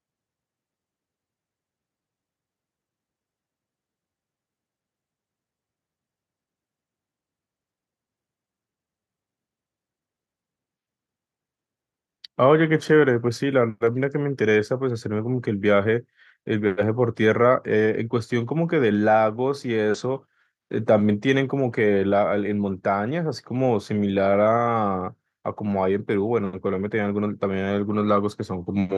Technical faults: none

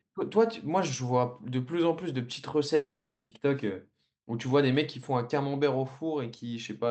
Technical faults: long network dropout

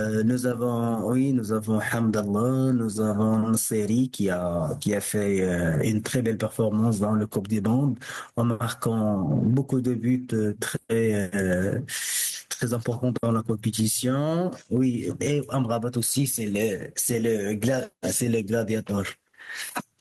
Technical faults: gain pumping

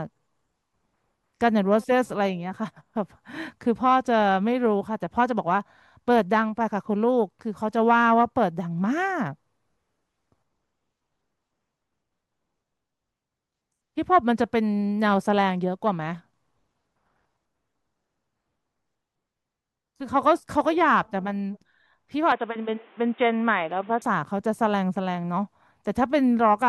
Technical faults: input switched to a poorer device

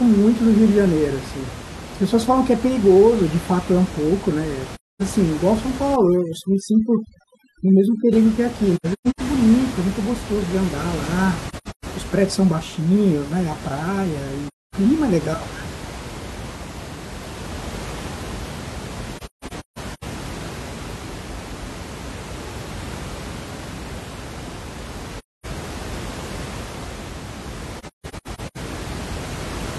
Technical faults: AAC frame loss with muting; overdone noise removal

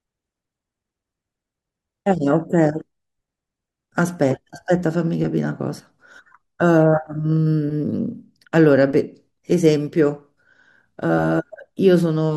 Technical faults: none

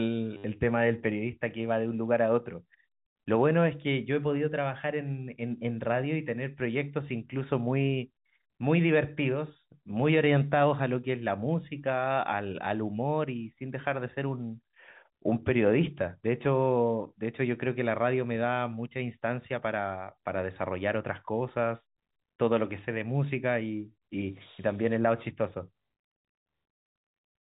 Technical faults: packet loss with last packet repeated

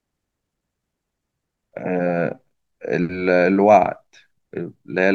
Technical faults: none

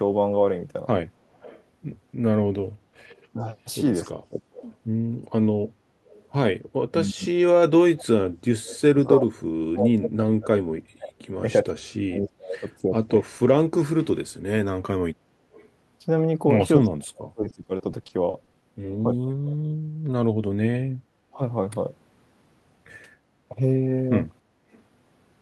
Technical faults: echo leak; speech suppressed in double talk; repeated packet loss (robotic sound); background gated by the echo canceller

